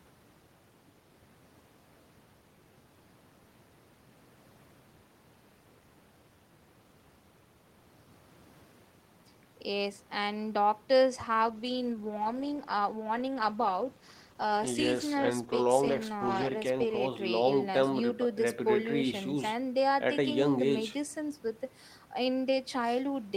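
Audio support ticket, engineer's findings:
Call bitrate drop, 11.21 s to 17.05 s: speech turns rough and watery for almost 6 s, then clears. Component: Opus encoder, following a fall in the bandwidth estimate, rate cut from 32 kbps to 15 kbps. Spectrogram shows blotchier, coarser harmonics across the span; waveform envelope unchanged, degradation is spectral.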